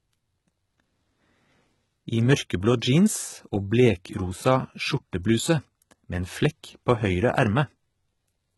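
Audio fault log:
Throughout, HE-AAC compression: the treble sounds bright yet synthetic, with s sounds turned gritty and metallic, and nothing at all above 11.8 kHz. The heavy damage fits a bitrate around 16 kbps, where only the lower band is coded and the top is likely rebuilt by copying lower bands upward. On a spectrogram the upper region shows repeated, blocky patches whose harmonics fail to line up with those below the crossover, ending in a hard ceiling.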